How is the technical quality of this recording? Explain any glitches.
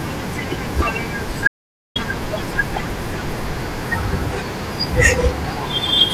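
The recording has one clear glitch. From 1.47 to 1.96 s there is an audio dropout to silence: about 0.48 s of speech vanishes abruptly, likely because the input was briefly lost while the recorder kept writing zeros. Unlike a natural pause or noise gating, the gap is silent, with no room tone underneath.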